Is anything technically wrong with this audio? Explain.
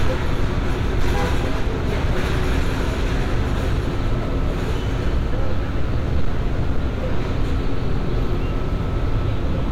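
Yes. Hard clipping runs through the whole clip. The sounds were driven about 6 dB past what the signal path could carry, so each peak that crossed the ceiling was sliced off flat. Only a small share of the samples, around 2 percent, hit that limit, but every flattened top adds high harmonics that were never in the source. The result is a crackly, gritty edge on the loudest moments.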